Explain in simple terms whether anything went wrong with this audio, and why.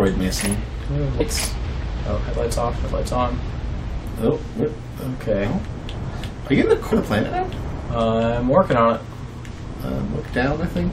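The audio jumps forward three times, at 1.20 s, 3.73 s and 6.91 s. These are compressed frames skipped: short blocks of the compressed file, each about 23.2 ms long, were never played, either because they were missing or because the decoder rejected them as damaged. About a tenth of a second disappears at the first and third points and about a fifth at the second.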